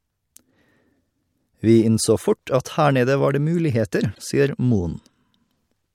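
Damaged data in a compressed stream appears at 4.12 to 4.19 s, a burst lasting under a tenth of a second. Some of the compressed bytes there were corrupted, so the decoder could not read those frames correctly, lost its place and had to hunt for the next valid frame header before the speech could resume. What the listener hears is a short, unnatural chirp, squawk, click or brief hole breaking into the speech.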